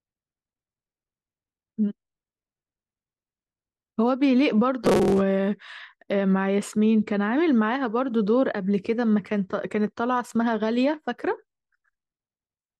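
From 4.85 to 5.23 s, robotic sound from repeated short buffers: a 188 Hz buzz, likely repeated 5.3 ms chunks, giving evenly spaced spectrogram stripes.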